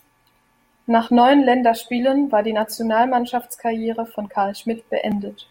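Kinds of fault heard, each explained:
Bit error spike: a single flipped bit throws one sample off by a power of two before it snaps back, heard as one sharp tick at about 2.62 s, just after "war die", peaking near -24 dBFS; the waveform shows a lone one-sample needle, the spectrogram a thin full-height vertical line.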